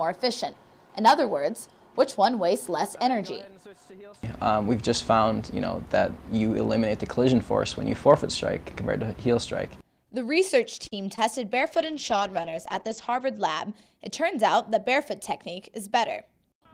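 A packet arriving late emptied the jitter buffer at 10.87 to 10.94 s, a short stall from a late packet. The receiver stretched the last sound for about 41 ms until the packet came, then resumed where it left off, so nothing is lost but the audio is held too long and everything after runs about 41 ms later. At 11.16 to 11.19 s, a short concealed packet loss follows: roughly 20 ms never reached the decoder in time, and the receiver filled the gap by extending the preceding sound before blending back, heard as a brief smear where that fragment is missing. From 11.59 to 13.79 s, a call bitrate drop occurs: the bandwidth estimate fell and the encoder went from 32 kbps to 11 kbps, staying at the lowest rate for about 1.6 s. Audio bandwidth narrows from 20 kHz to 8 kHz, so the sound turns coarser and duller until the rate recovers before the clip ends.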